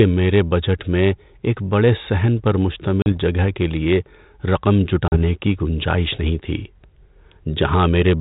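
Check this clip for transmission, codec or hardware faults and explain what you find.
Two dropouts from packet loss on an ADPCM call, at 3.02 to 3.12 s (after "ایک بڑے صحن پر") and 5.08 to 5.18 s (after "جگہ کے لیے رقم"). Each time about 40 ms of audio, roughly a couple of packets, went missing and was filled with silence. The receiver's adaptive predictor and step size then no longer matched the sender's, so each hard-edged gap is followed by sound returning with brief, slight distortion that settles within tens of milliseconds. The light coding noise of G.726 ADPCM is consistent with 32 kbit/s.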